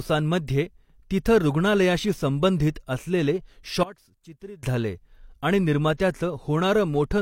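From 3.83 to 4.63 s the speech suddenly drops about 20 dB and then returns. That collapse points to one channel inverted, likely, so the shared material cancelled when the two sides were folded to mono, leaving only their small difference.

At 5.97 to 6.00 s there's pre-echo: a burst of hiss about 27 ms long lands just ahead of a sharp attack. The codec spread noise meant for the loud onset across its whole block, so it leaks into the quiet moment before and smears the attack.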